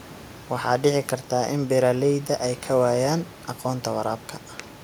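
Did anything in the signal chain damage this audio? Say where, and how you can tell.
No, nothing in the chain damaged this speech; the only other sound is the room's own background noise, about 22 dB below the voice, which was picked up by the microphone and is part of the recording.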